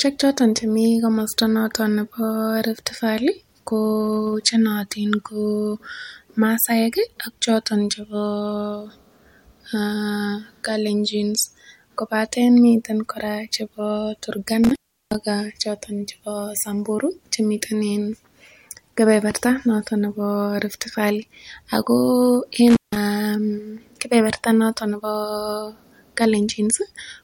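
Speech drops out with crackling edges at 14.64–15.23 s, just before "choto chebo", and 22.68–22.97 s: intermittent contact, a loose cable or plug briefly opening, for about 360 ms and 160 ms.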